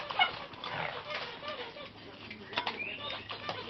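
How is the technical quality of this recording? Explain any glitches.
No glitches are audible anywhere in this recording, so there is nothing to explain.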